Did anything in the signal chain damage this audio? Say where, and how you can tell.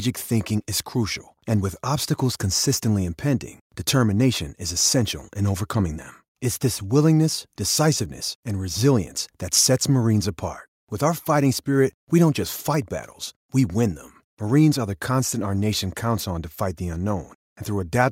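No, no signal-chain damage heard.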